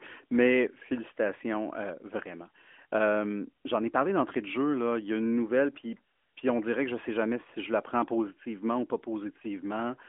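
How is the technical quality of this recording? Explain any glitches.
No glitches or dropouts can be heard in this speech recording, which comes over a narrowband mobile line using the AMR-NB codec at 12.2 kbps, so nothing above 3.5 kHz gets through and the coding leaves only light traces on the sound.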